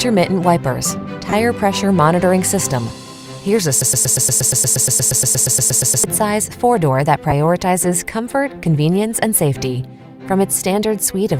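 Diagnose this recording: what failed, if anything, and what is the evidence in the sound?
Lost LE Audio frames on the Bluetooth link: short noisy smears at 1.30–1.33 s, 7.30–7.33 s and 10.53–10.56 s, covering 30, 15 and 22.5 ms of audio. The LC3 decoder's concealment reuses the last good spectrum with randomised signs, so tonal content becomes noise.

Broken-record loop at the player, encoder or stream stage: from 3.82 to 6.04 s a fragment of about 118 ms repeats exactly, back to back, 19 times. The likely cause is a stall that kept resending the last held buffer, so the audio due in that span is lost.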